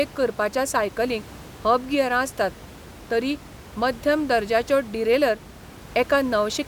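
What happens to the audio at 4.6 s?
Nothing goes wrong at 4.6 s: the audio is intact there, with only the room's own background noise, about 20 dB below the speech, sitting underneath as part of the recording.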